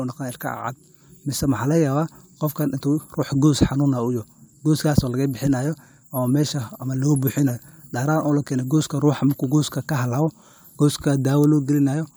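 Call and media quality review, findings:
No audible faults found in the speech signal, with no dropouts, clipping, level jumps or timing irregularities identified anywhere in the recording.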